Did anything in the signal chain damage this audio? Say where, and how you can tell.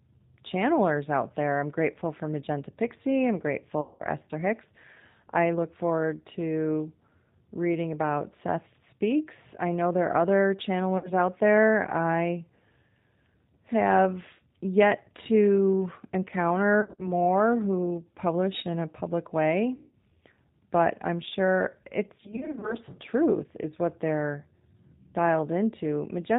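Yes. The damage comes from two stages: the codec and the network.

At the codec stage, the whole clip carries G.729 codec damage. Nothing above 4 kHz survives, so the speech sounds narrowband throughout. It also has a rough, slightly synthetic edge. That comes from the decoder rebuilding each 10 ms frame from a vocal tract filter, a pitch predictor and a few pulses instead of the real waveform. The damage is plainly audible and fits an 8 kbit/s G.729A stream.

At the network stage, there is VoIP packet loss concealed by the speech codec. Dropouts fall at 3.81 to 4.02 s, 10.98 to 11.13 s, 16.81 to 17.12 s, 19.75 to 19.95 s and 22.21 to 22.77 s. The decoder stretched its last pitch and filter over each gap, about 190, 60, 130, 180 and 200 ms long. The gaps are filled with a buzzy tone or coloured noise that fades. The third and fifth are broken up, with short bursts scattered across those spans.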